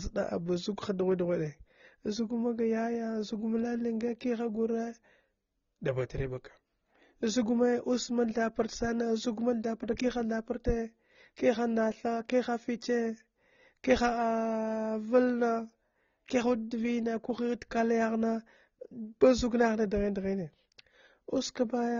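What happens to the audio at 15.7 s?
At 15.7 s you're hearing the same thing that runs through the whole clip: nothing above about 6.9 kHz, with doubled-up artefacts. That's likely transcoding between lossy codecs, a low-rate AAC pass re-encoded to Opus.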